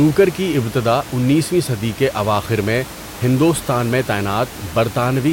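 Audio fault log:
No faults heard.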